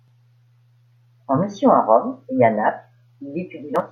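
Nothing stood out on listening to this speech recording.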